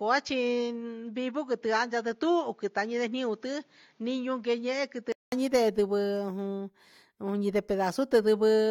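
Speech that sounds dull and band-limited from the start until 5.32 s, with nothing above 7.3 kHz, a level roughly 5 dB lower and a faint, different noise floor well below the voice. At 5.32 s a 200 ms silence gives way to full, brighter sound. That points to an input switched to a poorer device, likely another microphone or a headset's call profile, rather than a codec or filter bandwidth drop, which would not shift level and background noise together.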